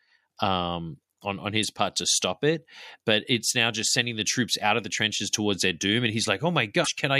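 Damaged data in a compressed stream shows up at 1.63 s, between "um on on" and "part to stop it", and again from 6.81 to 6.88 s. At both points the encoded bytes are corrupt, so the decoder misreads the affected frames, loses sync and hunts for the next valid frame header. The first is a brief blip; the second lasts about 70 ms.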